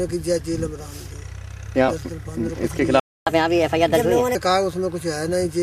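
A playback stall runs from 3.00 to 3.27 s. The sound cuts off mid-flow into about 270 ms of silence, most likely because the player ran dry of buffered data or its output thread was briefly blocked.

Catch-up at higher speed follows from 3.27 to 4.35 s. The player resamples its backlog to win back the lost time, so the sound runs 1.25 times faster and roughly four semitones higher.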